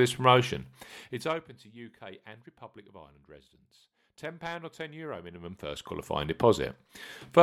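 Zipper noise appears from 1.02 to 1.44 s, just after "this promotion", as the level drops by roughly 20 dB, and again from 5.02 to 6.25 s as it climbs back by roughly 20 dB. The gain moves in unsmoothed jumps about 100 times a second, 1 dB each during the drop and under 1 dB each during the climb, which points to one update per short audio buffer. Each jump leaves a tiny click, so a fine ticking, zipping texture rides on the speech throughout each move.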